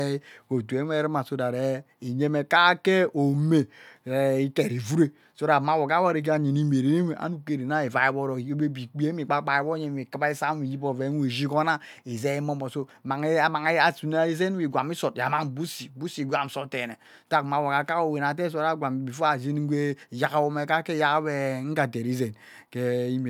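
No technical faults are audible anywhere in the recording.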